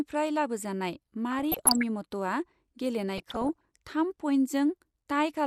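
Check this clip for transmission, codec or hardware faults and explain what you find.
Two faults are present: a constant dull, granular coding sound, and two short bursts of bubbling damage.

MP2 compression, throughout: the speech sounds muffled with a gurgling grain, likely from MPEG Layer II coding at a low rate, around 80 kbps. Starved of bits, upper sub-bands switch off and on. A spectrogram shows a ragged high-frequency ceiling with flickering band blocks.

DAB burbling, 1.32–1.83 s and 3.17–3.69 s: bit errors that slipped past error correction corrupt the MP2 samples and scale factors, so single sub-bands jump in level frame by frame. This sounds like bubbling chirps and squelches. A spectrogram shows scattered bright rectangular band patches, and the waveform shows brief level spikes.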